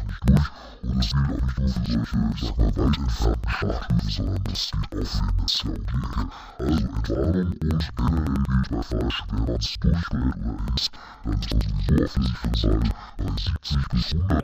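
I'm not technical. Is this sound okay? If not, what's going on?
No. Interleaved audio read as planar affects the whole speech clip. Stereo audio stores left and right as alternating samples, but here each chunk of about 93 ms was split in half, one half treated as left and the other as right. Each half plays at half speed, so the voice sounds an octave lower, and the two halves overlap into a doubled sound. The seams between chunks create a choppy stutter about 11 times a second.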